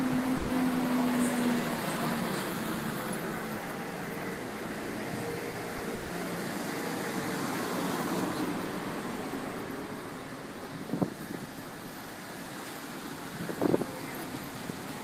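A burst of packet loss hits at 0.37 to 0.51 s and again at 5.95 to 6.11 s, where packets failed to arrive in time and the receiver covered the holes with about 120 ms and 140 ms of concealment respectively. It carries the last sound forward while lowering its level, so what you hear is a held buzz or a fading hiss depending on what came before, and then the audio picks up again with the same amount of real material gone, with no dead silence in either case. Short concealed packet loss appears twice in between, at 5.51 to 5.55 s and 5.77 to 5.81 s, each dropping 20 ms before the decoder received it. Here the receiver extends the preceding sound, following its pitch if it was voiced or substituting shaped noise if not, and then crossfades back into the real signal, giving a brief smear or wobble in which a very short sound can disappear entirely.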